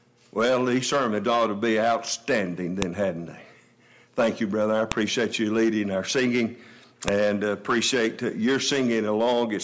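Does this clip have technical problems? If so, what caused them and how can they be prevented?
Yes. Separately recorded pieces of the file were joined end to end without stripping each piece's header, so the file header played as audio at three seams: 2.82 s, 4.92 s and 7.08 s. The few dozen bytes of header data are decoded as sample values, giving a sharp, loud click or snap at each join regardless of the surrounding sound. To prevent it, parse each file and concatenate only its audio data chunk, not the raw file bytes.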